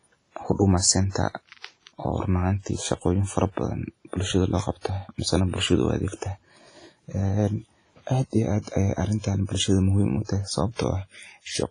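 From the first moment the speech carries a washy, ringing quality with a hiss that swells and fades along with the voice, and there's nothing at all above about 10.4 kHz. That's likely WMA compression, and heavy at that. The sound points to an early WMA encoder at a low bitrate, something like 24 kbps. Its long transform blocks smear quantisation noise over tens of milliseconds, and quieter spectral detail simply gets thrown away.

On top of that there's pre-echo at 1.10, 4.81, 8.62 and 9.20 s. Each time a sharp attack lands late in a transform block, the noise budget set for that loud onset spills backward into the quiet just before it. You hear a brief hiss run-up of roughly 40 to 50 ms, about 52 ms at the first one and 39 ms at the last, and the attack itself comes across soft and smeared instead of crisp.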